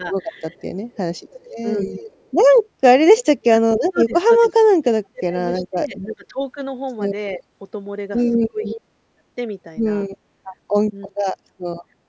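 From 0.0 to 9.24 s, the speech repeatedly dips, thins or drops out in pieces, for roughly three seconds in total and at worst by around 35 dB. This is likely speech suppressed in double talk: with both sides talking, the echo canceller muted this talker along with the echo.

Within that stretch, from 0.38 to 4.52 s, a faint copy of the voice trails about 310 ms behind, roughly 20 dB down. This is likely an echo leak: a loudspeaker's output reached the microphone on that same side and wasn't fully cancelled.

A brief, louder scrap of the same echo, about 15 dB down, returns 325 ms late at 8.65 to 8.77 s.

A fainter scrap, about 25 dB down, comes 331 ms late at 11.02 to 11.09 s.

Right after it, from 11.08 to 11.81 s, the voice is again cut back by around 35 dB for about half a second in another double-talk suppression.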